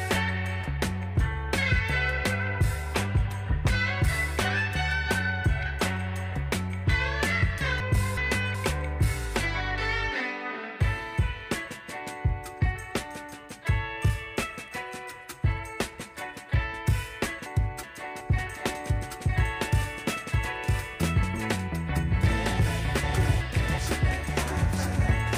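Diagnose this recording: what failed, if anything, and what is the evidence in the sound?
Chunks out of order, at the driver or buffer stage: three times a block of audio was delivered one slot late, so two neighbouring chunks of about 0.37 s swap places. This happens at 7.80 to 8.55 s, 17.46 to 18.20 s, and 23.03 to 23.78 s. Each spans roughly 0.74 s, which fits two swapped 371.5 ms chunks. Nothing is missing, but the sound briefly jumbles.

A doubled audio track starts abruptly at 18.38 s and runs to the end. The most likely cause is a second, slower capture path or an edit that left two out-of-step copies mixed together. A full-band duplicate trails the original by about one second at roughly the same level. It has no decay tail and no room colouring, so it sounds like a clean overlapping repeat rather than reverberation.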